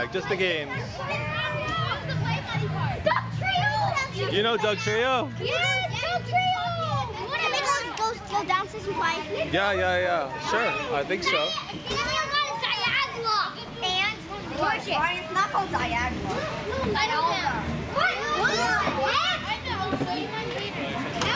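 No technical faults can be heard anywhere in the audio.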